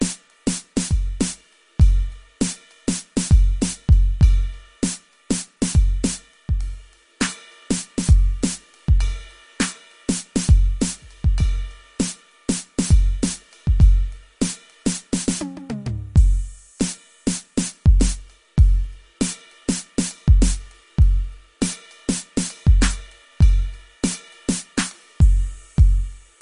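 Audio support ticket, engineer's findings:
MP3 compression, whole clip: watery, swirly music, smeared attacks, metallic chirps. Likely a low-bitrate encode, consistent with about 40 kbps. Spectrogram shows a hard ceiling at 10.6 kHz and flickering holes where weak lines drop out frame to frame.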